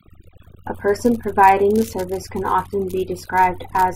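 Overdone noise removal affects the speech for the whole clip. A noise reduction stage has been set far too aggressively: every frequency band that falls near its noise estimate is pulled down hard or switched off, and the quieter parts of the voice are removed along with the noise. Between phrases the background drops to near silence scattered with twinkling specks.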